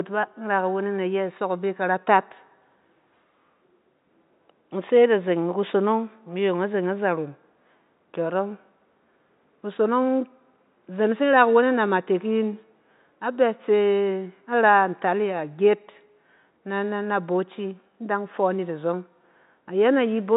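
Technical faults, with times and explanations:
No technical faults can be heard in this speech.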